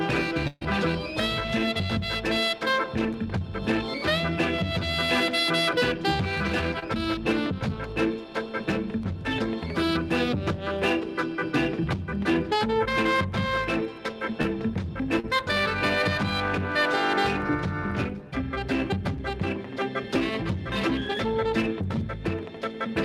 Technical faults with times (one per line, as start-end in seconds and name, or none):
0.47-0.63 burst of packet loss
6.79-6.84 short concealed packet loss
14.42-14.46 short concealed packet loss
15.20-15.25 short concealed packet loss